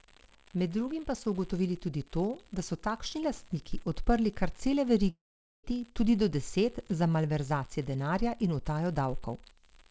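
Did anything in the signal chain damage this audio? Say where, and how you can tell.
Yes. A data line at the converter or digital interface stage has an unreliable data bit. A steady crackle or fizz runs through the whole clip, even in pauses. That bit flips in random samples, so every spike has the same size.

A long network dropout runs from 5.10 to 5.66 s, between "lastniki odprli kar cele" and "tudi do deset za". The receiver stretches the last sound into a fading buzz, then leaves near silence for about 0.46 s. The likely cause is lost packets, so that section never plays.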